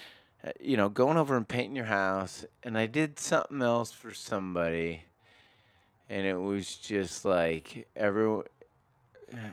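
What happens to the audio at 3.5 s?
At 3.5 s the speech sits inside a time-stretched section that runs from 1.91 s, right after "over and painting your", to the end of the clip at 9.53 s. The pace drops to about 0.68 times normal while the pitch holds, likely because software lengthened the audio by repeating short slices. It sounds dragged. On a spectrogram, harmonics keep their spacing but syllables stretch wider; the waveform shows elongated, repeated cycles.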